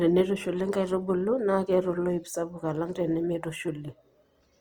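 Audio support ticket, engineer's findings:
Encoder starved of bits, likely low-rate Opus compression in its music (CELT) mode, consistent with roughly 24 kbps. Throughout the speech: band energy kept but detail refilled with folded or noise content, so tones go grainy and rough. Bandwidth intact to about 20.2 kHz.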